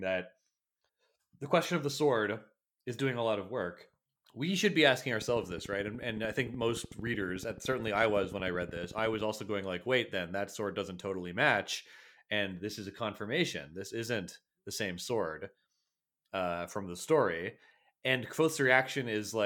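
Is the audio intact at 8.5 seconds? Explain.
No. At 8.5 seconds the audio sits inside a train of clicks running from 5.22 to 9.22 s, after "we should be asking" and ending before "also going like wait". About fifty near-identical pops arrive regularly, 13.5 per second, peaking about 5 dB above the speech. Interference or a faulty connection or power supply is the likely cause.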